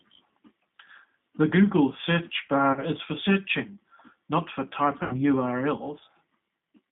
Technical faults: G.729 codec; VoIP packet loss concealed by the speech codec

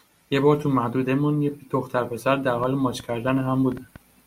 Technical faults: train of clicks

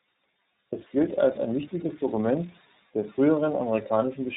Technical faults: tandem speech coding

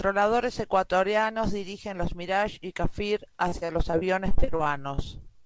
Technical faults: repeated packet loss (robotic sound); jitter buffer slow-down

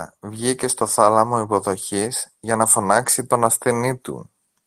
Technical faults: none

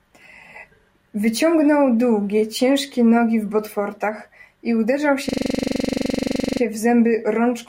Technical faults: system hang loop

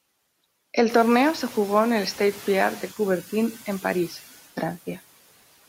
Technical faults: noise suppressor catching up

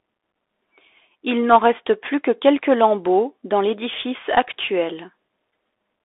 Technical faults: Bluetooth CVSD headset codec

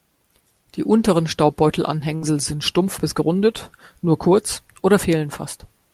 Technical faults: burst of packet loss

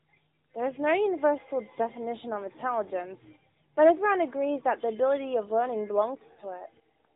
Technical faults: none

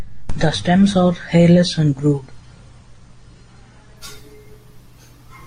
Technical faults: adaptive stream starting at a low bitrate

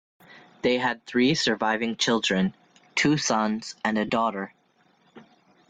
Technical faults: lost LE Audio frames

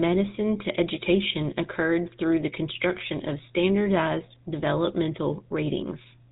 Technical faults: GSM full-rate codec

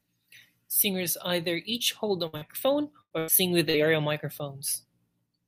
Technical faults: burst of packet loss; short concealed packet loss

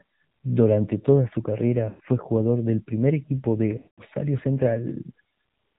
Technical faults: AMR narrowband mobile codec; lost AMR speech frames

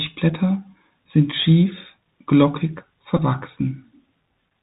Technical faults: Bluetooth CVSD headset codec; Bluetooth headset packet repeated

